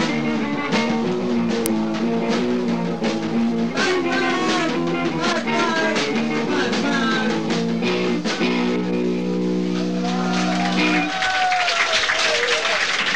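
At 1.66 s there is an uninitialised buffer. A block of audio was sent to the output before anything had been written into it. Whatever data sat in that memory was played as if it were sound. The result is a sudden, loud crack. It lasts about 1.45 ms, which fits a 64-sample block. It is so brief that it reads as a single harsh click.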